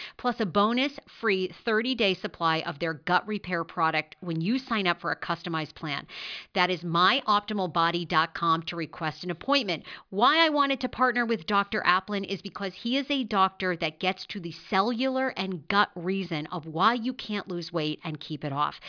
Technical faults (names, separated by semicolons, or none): none